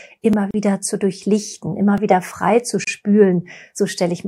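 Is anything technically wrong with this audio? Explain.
Yes. The speech has two kinds of technical faults.

Repeated buffer, at 0.33 s and 1.98 s. The second comes between "zu durchlichten" and "wieder frei zu". New audio arrived late, so the device played its last chunk again. Each chunk lasts 1.45 ms, which fits a 64-sample buffer. The first repeats once, the second twice. With so tiny a buffer, each is heard as a click or brief buzz, not a stutter. No audio is lost.

Gap at a join of encoded pieces, from 0.51 to 0.54 s and from 2.84 to 2.87 s. The first comes just before "zu durchlichten", the second just after "wieder frei zu". Separately encoded pieces were joined untrimmed. Encoder start delay and end padding stayed in. This opens silences of 34 ms and 31 ms. Their edges are smeared by the codec. The speech then resumes where it stopped.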